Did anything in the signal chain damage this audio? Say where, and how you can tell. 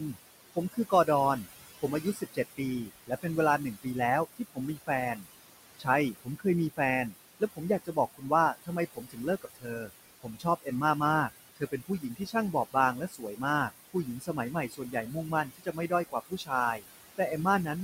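Yes. The damage happens in call processing, and the tell is noise suppressor artifacts across the whole clip. The room noise sits about 11 dB below the speech. Between phrases the suppressor pulls that residue down by about 18 dB, then lets it back up under the speech. You hear the floor pumping in step with the talker. That comes from the suppressor deciding band by band and frame by frame what counts as steady noise.

The same stage also causes speech cut by the noise suppressor. From 0.0 to 10.68 s, roughly three seconds in total are turned down, by up to about 20 dB. From 11.29 to 17.69 s, about two seconds more are hit, with drops reaching about 21 dB. The affected parts are quiet speech energy that the suppressor classed as noise and attenuated along with the background. That is why some consonants and word tails sound swallowed or suddenly faint.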